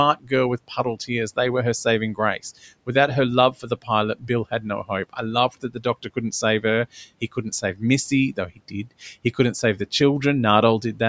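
The call's noise suppressor repeatedly mistook parts of the speech for background and turned them down along with the room noise, which sits about 27 dB below the speech. This speech cut by the noise suppressor occurs at 0.16–0.32 s, at 0.68–1.1 s just before "they were her saving", and at 3.52–3.89 s and 4.15–4.3 s. It recurs at 5.49–5.86 s between "no hope I" and "couldn't save her", at 7.21–7.82 s after "couldn't save her", and at 8.34–8.92 s. The drops reach about 11 to 18 dB, leaving brief stretches swallowed or faint.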